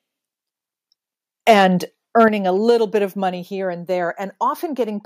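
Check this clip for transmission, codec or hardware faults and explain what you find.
Two faults are audible in this speech.

Microphone overload at 1.48–1.64 s, peaks about 4 dB over, and 2.19–2.25 s, just before "a little bit of", about 3 dB over. The peaks are flattened, giving a harsh crackle. The likely cause is input gain set too high. Unlike codec distortion, the harshness follows the loudest syllables only.

Microphone volume stepped down at 2.28 s, right before "a little bit of", by about 7 dB, and at 3.3 s, between "a little bit of" and "here and", by about 3 dB. Voice and background fall together in one instant step that then holds, unlike a dropout or a gradual fade.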